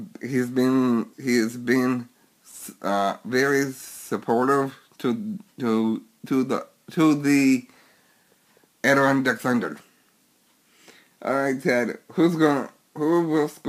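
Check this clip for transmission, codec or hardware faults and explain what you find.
One fault runs through the whole clip: crude rate conversion. Repeated samples, with no filtering, leave errors about 30 dB down. This fits 44.1 kHz to 48 kHz. The result is a gritty, inharmonic fizz.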